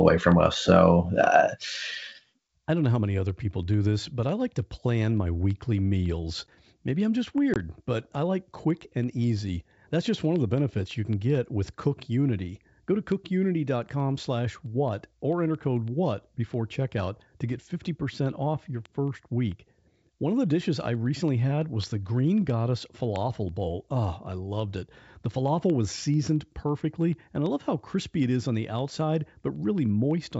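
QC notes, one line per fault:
7.54–7.56 s, packet loss on an ADPCM call: about 20 ms of the speech drops to hard-edged silence, roughly one packet. The decoder's predictor and step size lose step with the sender, so the speech returns with brief distortion before settling within tens of milliseconds, over clear G.722 wideband coding.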